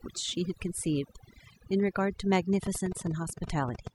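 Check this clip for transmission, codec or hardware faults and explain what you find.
Two faults are audible in this speech clip. One runs the whole way through, and one sits near the end.

Overdone noise removal affects the entire clip. A noise reduction stage was set too aggressively. It pushes individual frequency bands down or out whenever they come close to its noise estimate. Quiet parts of the speech fall below that line and vanish with the noise. The pauses drop to near silence, scattered with small twinkling specks.

A train of clicks runs from 2.53 s to 3.88 s. It comes at roughly 12 clicks per second, with uneven spacing, and there are around fifteen in all. The clicks share much the same shape. They stand out well above the speech, peaking about 10 dB over it. The likely source is electrical interference or a faulty connection or power supply injecting repeated pulses. The result is an irregular ticking over the sound. 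It is heard in the gaps as well.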